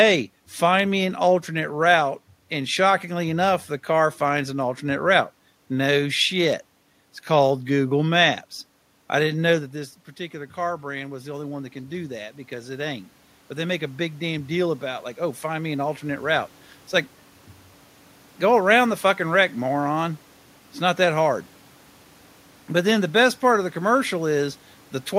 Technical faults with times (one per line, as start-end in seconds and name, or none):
9.52-16.33 automatic gain rising